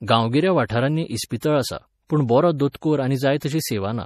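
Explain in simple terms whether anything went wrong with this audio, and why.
Yes, two related problems. Throughout this speech, the sound is watery and swirly, with nothing above about 14.4 kHz, so it seems dull. That is MP3 compression, likely from too few bits. Unlike plain muffling, it also warbles and shimmers.

There is also pre-echo, a short hiss just before sharp sounds: at 0.68 s, 1.40–1.43 s just before "आसा पूण बरो", 2.72–2.75 s right after "आसा पूण बरो", and 3.40–3.42 s. Unlike a click, it comes before the attack and softens it.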